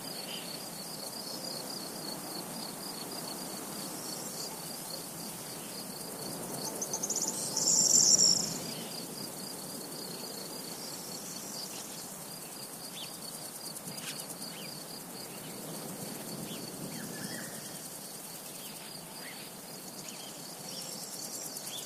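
No technical faults are audible.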